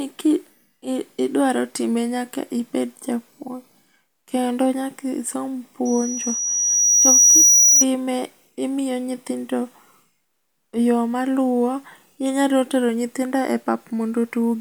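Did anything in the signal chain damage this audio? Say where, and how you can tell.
Yes. Loudspeaker feedback squeal occurred in the acoustic playback loop: the microphone picked up its own loudspeaker, and loop gain passed one near 5.8 kHz. Just after "kendo nyaka isom", a pure tone swells over roughly 1.5 s from 5.85 s, peaks about 10 dB above the speech, then stops at 7.85 s.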